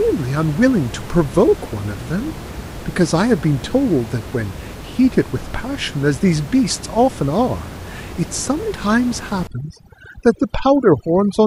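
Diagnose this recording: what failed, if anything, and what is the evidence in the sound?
Overdone noise removal in the call-processing stage, from 9.47 s to the end. The room noise, about 14 dB below the speech, drops and breaks up into twinkling specks. The suppressor cuts bands near its noise estimate, taking quiet speech with them.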